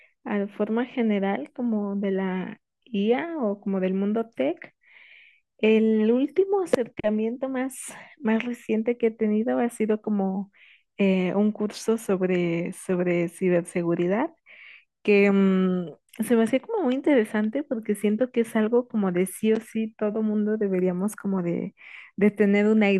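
No faults were heard anywhere in this speech recording.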